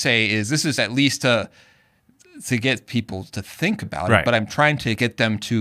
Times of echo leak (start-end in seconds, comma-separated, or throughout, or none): none